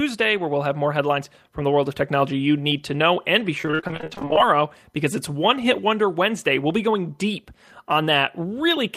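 Repeated packet loss (robotic sound) runs from 3.58 to 4.40 s in this speech clip, ending just before "because it's". Short gaps, none longer than 42 ms, follow one another rapidly. Each is patched by extending the previous sound, so nearly half the span is concealment, heard as choppy speech with pieces missing.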